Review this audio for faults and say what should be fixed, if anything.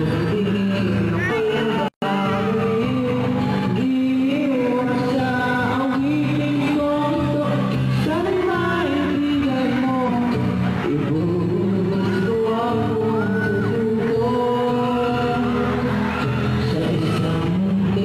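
Damaged data in a compressed stream at 1.26–1.31, 7.39–7.45, 10.03–10.09 and 13.56–13.61 s: corrupted frames make the decoder lose sync and resynchronise at the next frame header. Prevent it by checksumming files and transfers and re-fetching any corrupted segments.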